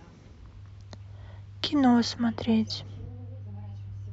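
From 2.01 s to the end, de-emphasis applied wrongly rolls the treble off smoothly, about 14 dB down at 10 kHz, leaving the speech dull and muffled.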